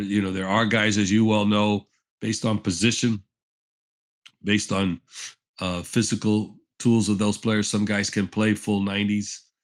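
No technical faults are audible.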